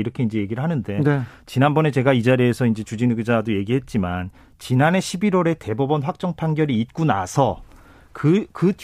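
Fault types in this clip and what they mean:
No technical faults can be heard in this speech recording; the signal holds steady, with no gaps, distortion or level disturbances at any point.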